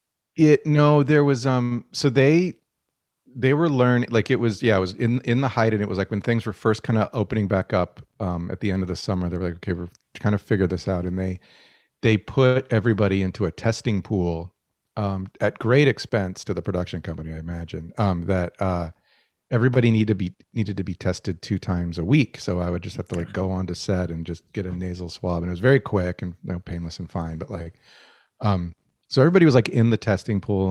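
At 1.63 to 1.73 s, just after "no there was", there is a short stall from a late packet. The jitter buffer ran dry. The last sound is held for 74 ms, then speech resumes with nothing lost. It sounds briefly frozen, with a slight buzz or dip.

From 7.43 to 8.16 s, between "were first kind of" and "um at the end", a jitter buffer speed-up trims the excess delay. Small pitch-period slices are cut out, roughly 70 ms in all. Speech runs at 109% speed at the same pitch and sounds hurried.

At 12.46 to 12.57 s a second stall holds a sound for 94 ms while a late packet is awaited.

From 17.79 to 18.65 s, after "the production company I", another speed-up removes about 100 ms. The speech runs at 111% speed and sounds rushed.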